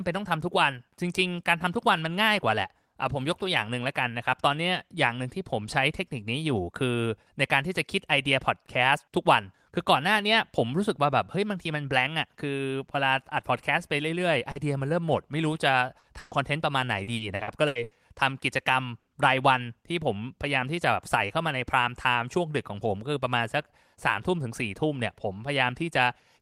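At 14.51 s and again at 15.99 s there's a short concealed packet loss, about 40 ms each time. The receiver papered over the missing audio by stretching the last bit of speech, so you get a quick smear or wobble rather than a clean dropout.

Right after, from 16.19 to 16.34 s, comes a burst of packet loss: about 120 ms went missing in one go. The decoder holds the previous sound and lets it fade, so it turns into a brief buzz or hiss before the speech picks up further along, with that piece gone.

Between 17.03 and 17.94 s it gets rough with repeated packet loss. Six separate gaps, the longest about 80 ms, add up to roughly a third of that stretch being filled in. The speech turns choppy there.

One more burst of packet loss hits at 18.99 to 19.10 s, this time about 80 ms. It's the same held-then-fading patch, and the speech jumps forward once real audio returns.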